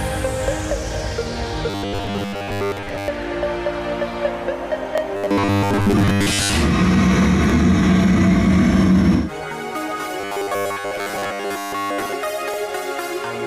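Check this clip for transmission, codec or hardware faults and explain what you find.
Two faults are present: a robotic buzz in three stretches and a regular overlap stutter at chunk joins.

Robotic sound from repeated short buffers, 1.7 to 3.08 s, 5.17 to 6.53 s and 10.21 to 12.13 s. The buzz sits at 100 Hz, which fits a 10 ms slice being replayed, likely because fresh audio arrived too seldom and playback looped the last buffer instead. Most of the real audio in these spans is skipped, so the sound becomes a stiff, metallic drone that only loosely tracks the original contour.

Overlapping chunks at 4.98, 7.50, 10.02 and 12.54 s, spaced 2.5 s apart. Each new chunk begins 20 ms before the previous one finished, so that sliver plays twice at every join. The result is a brief click-like stutter recurring at the same 2.5 s rhythm.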